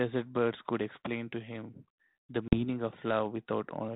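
At 2.48 s the speech drops into a hard-edged gap of about 40 ms, roughly two packets. That is packet loss on an ADPCM call, here G.726 at 32 kbit/s. The decoder's predictor and step size lose track of the sender's, so the speech resumes slightly distorted until about 2.64 s. On a waveform it shows as a flat silent hole with square edges, followed by a short misshapen stretch. A spectrogram shows a blank vertical band.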